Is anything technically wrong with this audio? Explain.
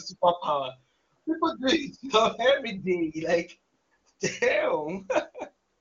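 No, nothing here sounds technically wrong: it's just speech through a wideband HD Voice path, and at what sounds like its top rate of around 24 kbit/s it comes across without anything worth flagging.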